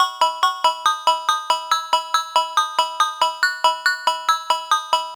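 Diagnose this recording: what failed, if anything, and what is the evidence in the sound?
Overlap-add ripple runs through the whole clip, from start to finish. The failure sits in a frame-based processing stage, most plausibly call processing, where the audio was split into windowed frames and rejoined with an overlap whose windows do not sum to a constant gain. The level therefore swells and dips once per frame, by about 11 dB, at a rate of around 300 Hz. That is heard as a metallic buzz with extra tones around each sound.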